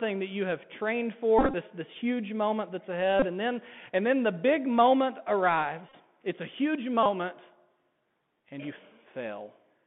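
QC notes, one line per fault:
Throughout: Bluetooth CVSD headset codec. The sound is held between about 150 Hz and 3.5 kHz, so nothing bright survives. A one-bit delta coder with an adapting step leaves granular hiss, scratchy s sounds and distortion on loud high sounds. This fits 64 kbps CVSD.
1.39–1.54 s, 3.20–3.26 s, 5.89–5.96 s, 7.03–7.06 s: Bluetooth headset packet repeated. Lost packets were replaced by re-decoding the previous one. That repeat every 3.75 ms gives a short buzz near 267 Hz. The first and third events are scattered, with runs up to roughly 30 ms.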